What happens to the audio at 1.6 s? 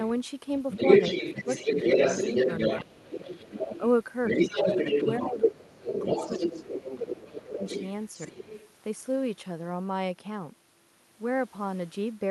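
At 1.6 s a second voice runs alongside the main speech, about 5 dB louder than it. This is the other side's voice leaking through, present from 0.71 to 3.89 s. The likely cause is that the talker's loudspeaker was playing the far end into the microphone and the echo canceller failed to subtract it, so the far party's speech passes back down the line alongside the talker's own.

Within that stretch, between 1.34 and 1.77 s, the main voice itself sags by a few decibels in brief patches totalling around a fifth of a second, so it sounds momentarily pushed back. This is speech suppressed in double talk, likely caused by both parties speaking at once: unable to tell the talker apart from the echo, the canceller attenuated everything together.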